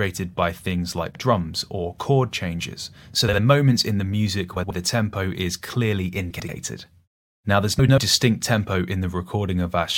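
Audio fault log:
1.10–1.20 s, 3.28–3.39 s, 4.56–4.71 s, 6.30–6.50 s, 7.79–7.98 s: frames out of order, where neighbouring blocks of 46 to 93 ms play swapped, giving a garbled flutter and no lost time.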